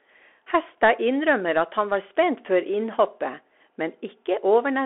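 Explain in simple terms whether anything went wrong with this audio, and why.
The speech went through a Bluetooth CVSD headset codec, which cuts everything above 3.8 kHz throughout, leaving it thin, muffled and plainly gritty.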